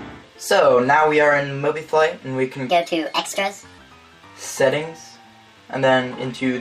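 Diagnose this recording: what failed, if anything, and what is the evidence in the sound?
A wrong sample rate fault at the playback stage affects the section from 2.69 to 3.78 s. There, everything runs 1.38 times fast and jumps 5.55 semitones up in pitch. Speed and pitch move together, with no conversion artefacts. That points to samples clocked out at the wrong rate rather than processed. The ratio fits material recorded at 32 kHz being played at 44.1 kHz. The sound then snaps back to its normal pace and pitch.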